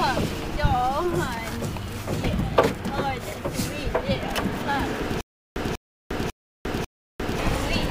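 From 5.21 to 7.39 s there is a stutter with silent gaps: a 194 ms burst repeats four times, each followed by 351 ms of dead digital silence, every 545 ms. A stalled player replaying its last fragment is the likely cause. Identical repeats set it apart from random dropouts.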